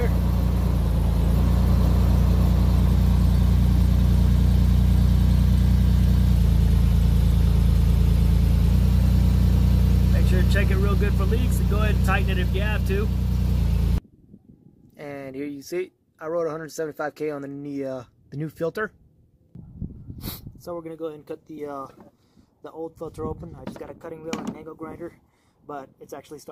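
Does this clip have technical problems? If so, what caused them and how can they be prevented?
Yes. From 13.59 to 14.46 s the sound slows 6.28% and drops 112 cents, then from 23.84 to 24.78 s speeds 6.28% and rises 105 cents, likely a drift correction step. Gradual resampling-based clock correction prevents it.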